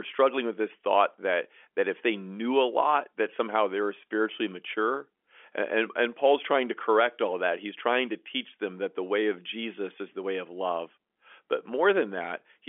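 No faults are audible in the speech; it carries the narrow band of ordinary G.711 telephone coding, roughly 300 Hz to 3.4 kHz with nothing above about 3.7 kHz, as expected for a fixed-line call.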